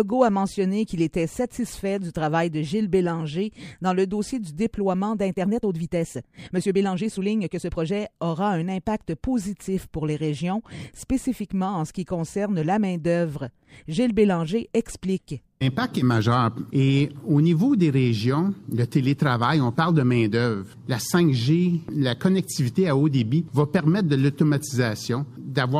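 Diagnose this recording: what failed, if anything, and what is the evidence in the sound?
A time-stretched section runs from 5.34 to 7.92 s: the pace jumps to 1.36 times normal while the pitch holds, so the sound turns rushed. A plain speed-up would raise the pitch. The likely cause is editing software dropping short slices to shorten it.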